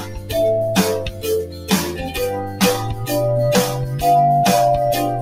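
A noise suppressor applied to music or sounds stays on throughout. It treats steady tone and ambience as noise. Level swings by around 15 dB as it clamps and releases. Attacks pass, sustains sink. The sound pumps and thins.

Sound cut by the noise suppressor comes at 0.00 to 0.33 s, about 10 dB down, and at 1.05 to 1.25 s, about 9 dB. It returns at 1.43 to 1.70 s, about 10 dB, and at 2.42 to 2.61 s, about 8 dB. Each time the held sound ducks briefly.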